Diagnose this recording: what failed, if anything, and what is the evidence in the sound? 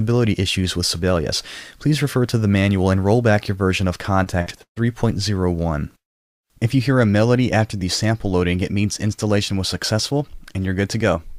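The network stage failed with repeated packet loss (robotic sound) from 4.23 to 4.78 s. Four gaps open there, the longest 138 ms. Each is patched by extending the last sound. About 40% of that stretch is concealed, leaving it choppy and robotic.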